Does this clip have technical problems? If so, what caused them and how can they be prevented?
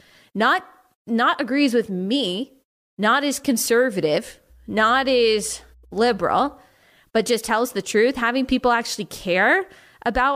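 Yes. Between 4.50 and 6.54 s, mains hum enters the speech: a ground loop or nearby transformer couples the 60 Hz power line into the signal, adding a steady low drone with some low harmonics, around 30 dB below the speech. Prevent it with balanced cabling, a single grounding point, and mic leads kept away from power supplies.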